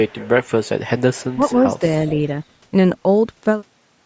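Right from 0.07 s to 0.8 s there's a faint delayed copy of the speech trailing about 414 ms behind, sitting around 20 dB under the main talker. That's an echo leak: the far end is most likely on a loudspeaker, and its echo canceller let part of what the mic picked up get sent back. It returns more quietly, roughly 30 dB down with the same 414 ms lag, from 0.98 s to 1.39 s and again briefly at 1.71 to 1.79 s. The constant delay is what marks all three as the same leak.

Overlapping that middle stretch, between 1.34 s and 1.53 s, the talker's own level dips by up to about 15 dB in pieces totalling roughly a tenth of a second. That's speech suppressed in double talk: with both sides active, the canceller likely couldn't tell the talker from the loudspeaker echo and turned them both down, so the speech briefly ducks under.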